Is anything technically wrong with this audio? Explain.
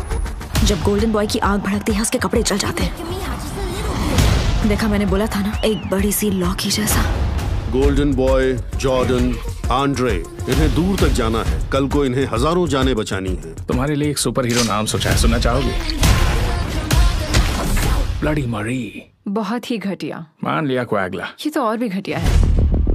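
No, nothing technically wrong turns up anywhere in this audio.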